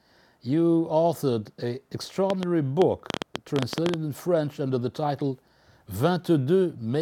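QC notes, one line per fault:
2.30–3.95 s, train of clicks: around fifteen similar pops at roughly 9 per second, uneven spacing, peaking well above the sound, likely interference or a faulty connection.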